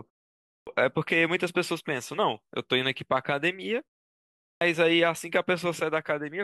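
Speech with a clipped start after a pause, twice: at 0.58 s, after a 0.56 s pause, about 90 ms is lost, and at 4.51 s, after 0.7 s, about 100 ms. The output device sleeps in silence and wakes late. Muted pauses would drop only background; here word onsets vanish.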